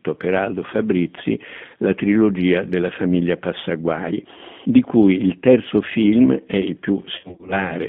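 From the start, the whole clip has the G.729 codec sound. Everything sits in a narrow line band, roughly 150 Hz to 3.5 kHz, with nothing above. The rough, slightly synthetic grain fits G.729A at 8 kbit/s. The coder rebuilds each short frame from a vocal tract filter, a pitch predictor and a handful of pulses, and here that damage is plainly audible, not just a bit of dullness.

Then right after "terzo film è il", from about 7.16 to 7.69 s, there's VoIP packet loss concealed by the speech codec. Roughly 210 ms of audio goes missing, scattered over about 320 ms, with the longest gap around 40 ms. Each time, the decoder fills in by stretching its last pitch and filter state while turning the level down, so the speech goes buzzy or noisy and smeared. It stays weak and warped for a moment after packets return, because every frame builds on the one before.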